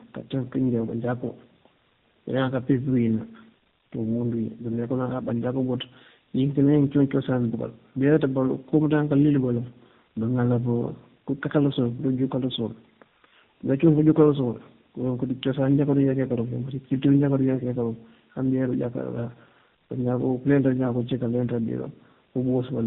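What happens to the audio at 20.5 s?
At 20.5 s the speech carries tandem speech coding, which runs through the whole clip rather than starting there. The sound suggests two low-rate speech codecs in sequence, consistent with a G.729A-style coder followed, across a G.711 link, by AMR-NB. Each stage re-encodes the previous one's already damaged output, so errors compound. The result is rough, muffled and warbly, with nothing above 3.8 kHz.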